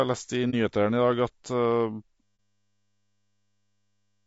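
Speech runs rough and grainy throughout, with noise filling the gaps between harmonics and a thin, synthetic-sounding top band; that points to low-delay AAC compression, likely AAC-ELD at a low bitrate around 32 kbps, whose short frames resolve pitch poorly, unlike the smeared pre-echo of long-frame codecs. At 0.50 to 0.54 s there is a brief dip of about 30 ms that fades out and back in, which fits a single AAC frame lost and muted by the decoder; a plain dropout would cut hard and click. Another such muted frame falls at 2.37 s. From 2.23 s to the end, a system hang loop takes over: one 10 ms piece of audio repeats exactly at 100 Hz, heard as a steady buzz rather than varied stutter, and about two seconds of speech are lost behind it.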